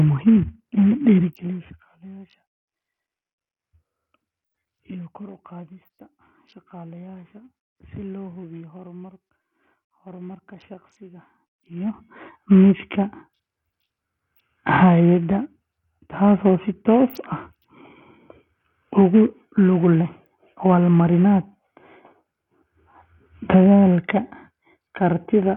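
Bluetooth SBC compression, throughout: heavy, gritty coding damage with nothing above 17 kHz, likely from a starved SBC bit pool, which fits a bitrate near 48 kbps.

Zipper noise, 1.19 to 1.84 s, just after "in la": a drop of roughly 20 dB applied in coarse steps, around 200 per second, leaves a fine ticking buzz during the fade.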